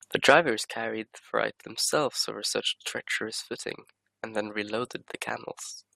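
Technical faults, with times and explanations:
3.31 s to the end at 5.96 s, one channel drops out: the speech abruptly falls by about 6 dB and stays down, with no fade or recovery. This is likely one side of a stereo pair going silent before a mono fold-down, so sound shared by both channels loses half its contribution. Unlike a gain dip or compressor pumping, the drop is a clean step of exactly that size, and anything carried only on the lost side would vanish outright.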